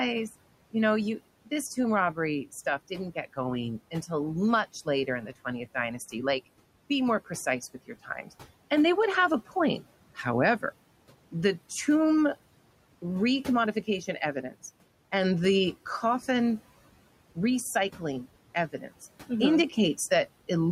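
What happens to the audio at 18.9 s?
At 18.9 s the noise suppressor is cutting into the speech. From 18.72 to 18.91 s it treats part of the talker's sound as background noise. It turns that part down along with the noise, by up to about 12 dB. Roughly a tenth of a second of speech is affected in total. A soft sound or word ending in this span comes out faint and swallowed, as if clipped short.

The same suppressor is active underneath throughout, producing noise suppressor artifacts. The room noise sits about 19 dB below the speech. The processor pulls it down by about 18 dB in the gaps and lets it rise again under the speech, frame by frame. Around 18.9 s this leaves the background pumping in and out with the talker.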